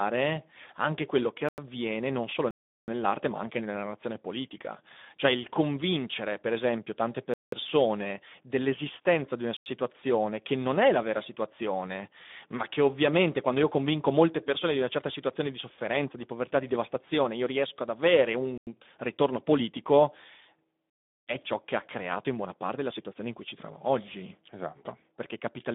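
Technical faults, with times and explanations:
Throughout: Speex codec. The speech sits in a narrow telephone-like band of roughly 200 Hz to 3.6 kHz, with nothing at all above about 3.8 kHz, so it sounds boxed-in and dull. At around 11 kbps this CELP coder can't spend enough bits describing the excitation signal, and you can plainly hear it: a grainy, hoarse roughness on the voice, the typical sound of older VoIP or game chat.
1.49 s, 2.51 s, 7.34 s, 9.57 s, 18.58 s and 20.90 s: block of digital silence. The audio drops to silence and comes back with no fade. The holes come in three sizes: about 93 ms at 1.49, 9.57 and 18.58 s, about 186 ms at 7.34 s, and about 372 ms at 2.51 and 20.90 s. The lengths double from one size to the next, which fits buffers of 4096, 8192 and 16384 samples that weren't filled in time. You hear it right after "anche quello che", again between "non solo" and "ma anche nella", and after "convincere per esempio tante".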